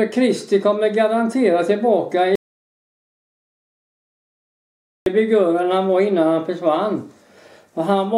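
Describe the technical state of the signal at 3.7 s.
At 3.7 s there is dead digital silence with no room tone: an audio dropout to silence from 2.35 to 5.06 s, likely a lost input while zeros were still written.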